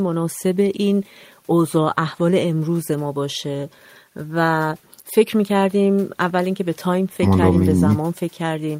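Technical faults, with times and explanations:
Nothing technical goes wrong anywhere in this speech recording, so there's nothing to flag here.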